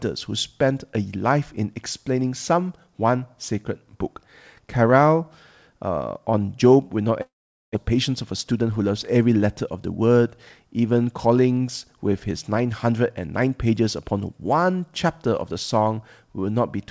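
Long network dropout, from 7.22 to 7.76 s: the speech stops short and the gap is bridged by a fading, buzzy continuation of the last sound, which thins into near-silence for most of its length. About 0.4 s of speech never returns. When sound resumes it picks up further along, with the missing stretch gone. The likely cause is a run of packets that failed to arrive in time, after which the playout delay shifts by around a tenth of a second.

Jitter buffer speed-up, from 7.90 to 8.90 s: right after the dropout, the speech runs about 7% fast while keeping its normal pitch, giving that second a slightly hurried, clipped rhythm. The receiver is holding more audio than it wants and sheds the excess by cutting out many tiny pitch-period-sized slices in succession. Together they remove roughly 70 ms. Throughout, the audio has no content above 8 kHz, consistent with a G.722 call path.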